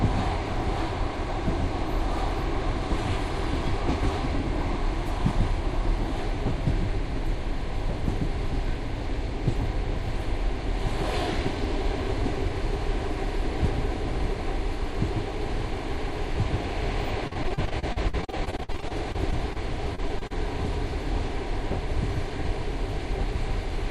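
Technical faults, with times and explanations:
17.27–19.57 s, repeated packet loss (robotic sound): over two dozen dropouts up to 50 ms, each patched by extending prior audio, leaving about a quarter concealed and a choppy texture with pieces missing.
19.95–20.32 s, repeated packet loss (robotic sound): four further dropouts up to 30 ms, again filled by repeating the last sound, giving a brief choppy stutter.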